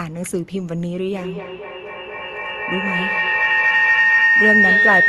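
A speech recording with feedback howl: from 1.12 s to the end, the loop between two devices in one room gains on every trip, with repeats roughly every fifth of a second, building a tone around 2 kHz that peaks about 6 dB above the speech.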